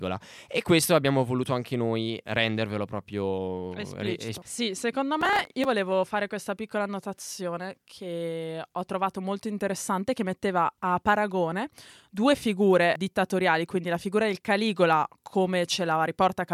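Speech with a burst of processor overload crackle from 5.21 to 5.66 s, between "sì secondo" and "fare questa piccola annotazione". About twenty buffers of around 5 ms each missed their deadline and were skipped, leaving hard-edged gaps that sound like gritty tearing. A spectrogram shows dense broadband vertical streaks, and the waveform shows tiny abrupt dropouts.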